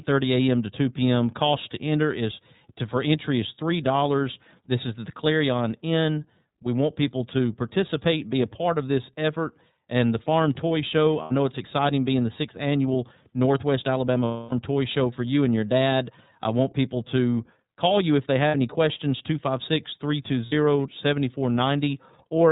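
The whole clip carries iLBC codec damage, and it is plainly audible. The speech is band-limited to below 4 kHz. It sounds rough and slightly synthetic. Each frame is coded on its own, and the sound fits 30 ms frames at the 13.33 kbps mode.

Lost iLBC frames break in four times. The first runs from 11.22 to 11.32 s, just before "it's exciting being the". The longest runs from 14.25 to 14.53 s. The third, from 18.48 to 18.55 s, sits between "call you if they" and "any questions". The last runs from 20.46 to 20.53 s. At each gap the decoder repeats the last pitch cycle mixed with noise. It sounds like a held, buzzy vowel. The gaps last 90, 270, 60 and 60 ms, which points to three, nine, two and two lost frames. Over the 270 ms gap the held tone fades. The voice is right again almost at once after each gap.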